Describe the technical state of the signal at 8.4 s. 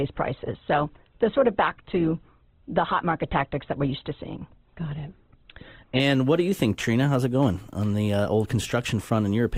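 At 8.4 s the signal is intact, with no audible fault at that point in the speech.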